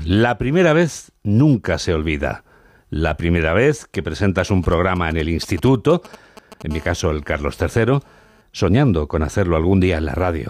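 Speech, interrupted by interference from a nearby 2G handset. From 4.49 to 6.63 s, right after "primera vez que presentas", GSM signalling bursts appear: a galloping dit-dit-dit of ticks and brief buzzes at about 217 Hz, roughly 20 dB below the speech. The phone is exchanging short control transmissions, and the audio circuit is rectifying each radio burst. From 6.71 to 8.42 s, ending just before "soñando con", it changes to a continuous GSM phone buzz, a hard, raspy 217 Hz tone rich in harmonics at about 30 dB below the speech. This is the steady burst cadence of a call in progress, demodulated by the audio circuitry and unrelated to the speech.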